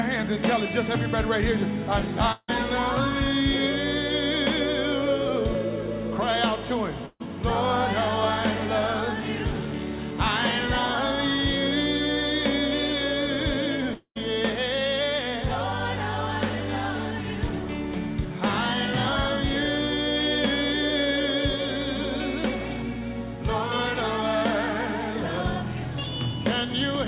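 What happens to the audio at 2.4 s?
From 2.32 to 2.50 s the audio breaks into a fading buzz, then briefly goes silent. This is likely a long network dropout: the receiver stretched the last sound until concealment gave out, unlike a brief packet loss that gets bridged smoothly.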